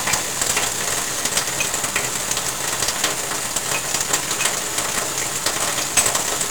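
Across the whole of this short sound recording, 1-bit DFPWM compression buries everything under heavy fuzz and crackle. With only one bit per sample nudging an adaptive level up or down, the reconstruction keeps over- and undershooting, and the grainy texture points to a stream of roughly 48 kbps. On a spectrogram, a dense broadband noise floor fills the plot from top to bottom and swamps the upper frequencies in hiss. The waveform looks thickened and jagged rather than smooth.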